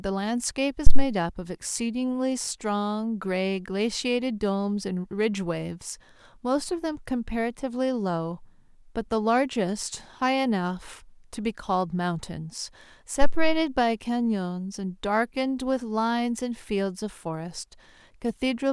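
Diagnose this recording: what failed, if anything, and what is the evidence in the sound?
Phantom power thump at the analogue input: a supply step through the coupling capacitors gives deep thuds at 0.87–1.05 s (about −1 dBFS) and 13.21–13.68 s (about −7 dBFS). Each decays smoothly over 41 and 104 ms respectively, unlike the irregular rumble of handling noise.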